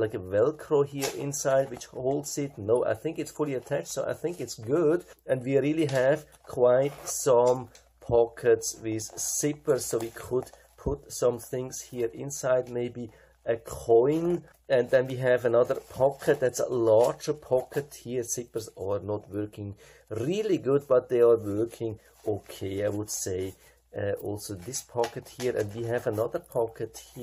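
No technical faults are audible anywhere in the clip.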